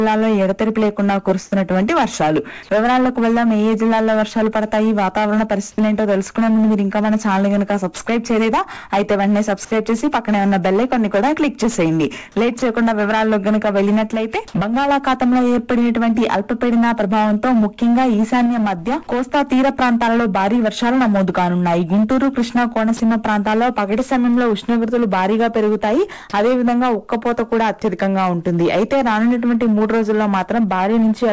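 The audio passes through a call path whose content stops at 8 kHz, which fits wideband G.722 at 64 kbps, and three short voice-detector faults stand out.

At 5.76 to 5.78 s there is an onset clipped by the voice detector. About 20 ms of the start is missing and replaced by comfort noise, so the sound begins abruptly without its soft attack. The likely cause is a detector that was slow to register that sound had resumed. This differs from a gate or fade-in because it is a flat noise patch before a hard start, not a gradual rise.

At 12.59 to 12.62 s and again at 22.97 to 23.00 s, sound is dropped by the voice detector. In each case 30 ms of sound gives way to steady comfort noise and then returns. The likely cause is the detector briefly judging the sound to be background and halting transmission. Packet-loss concealment would stretch or repeat nearby audio, but these gaps hold only featureless noise.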